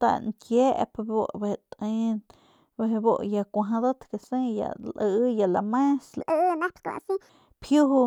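From 6.21 to 7.29 s there's a section at the wrong speed: that stretch of speech suddenly jumps up and hurries along at about 1.54 times normal, so the pitch lifts by something like seven semitones, and the talker comes out chipmunky and rushed for just over a second before snapping back. Since pitch and tempo move together, it's likely a piece that got played or rendered against the wrong clock rather than pitch-shifted on its own.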